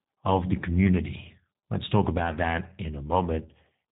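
Throughout, the speech has suffered tandem speech coding: it passed a CVSD link, then G.711 mu-law, then G.729A at 8 kbit/s, so the second speech coder re-encoded the first one's errors. It sounds rough, muffled and warbly, with nothing above 3.8 kHz.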